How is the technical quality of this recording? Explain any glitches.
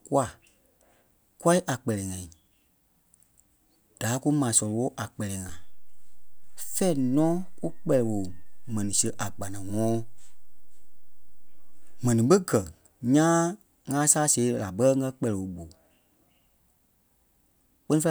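The recording has one clear glitch: a DC step. At 5.49 s the waveform's zero line jumps to an offset of about -32 dBFS, holds there, and snaps back at 12.11 s. This happens when a converter recalibrates or an offset-carrying input is switched in. Each jump is heard as a low thump, with the speech continuing unchanged. Unlike a dropout or a digital click, no audio is lost or distorted, and only the baseline moves.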